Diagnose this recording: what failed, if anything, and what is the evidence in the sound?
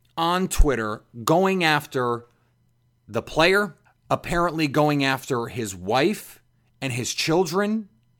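Nothing in this recording points to a failure at any stage from capture through to playback. The speech carries no audible sign of a fault that would call for a diagnosis.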